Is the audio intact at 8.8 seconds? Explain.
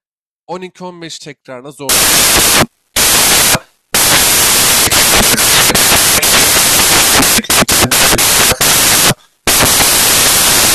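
No. From 1.89 s to the end, the samples are built from the wrong bytes, so the fast-changing low bits become the large part of each value. The speech turns into loud, harsh noise, close to white on loud sounds, unlike steady added hiss.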